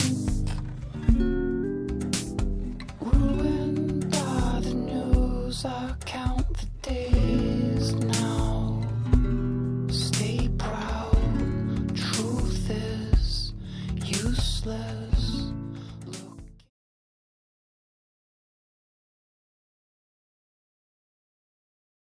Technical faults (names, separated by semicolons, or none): wrong sample rate